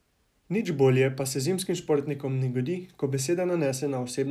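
A short speech recording with nothing technically wrong to be heard in it.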